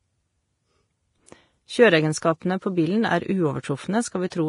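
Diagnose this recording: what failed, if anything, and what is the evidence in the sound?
The codec stage likely applied heavy Vorbis compression at a low bitrate, around 30 kbps. Throughout, nothing sounds above about 10.6 kHz, and the remaining treble of the speech turns hissy and grainy because coarse quantisation swaps fine detail for noise, blurring consonant attacks.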